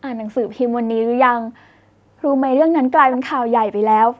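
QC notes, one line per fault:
3.12–3.18 s, echo leak: a brief, faint delayed copy of the speech surfaces, trailing the original by about 171 ms and sitting roughly 15 dB below it, short enough to register as a scrap rather than a full repeat. The likely cause is a far end playing the call over a loudspeaker whose echo canceller let some of the microphone pickup through and sent it back. The band-limited call path, with nothing above 8 kHz, shapes the echo too.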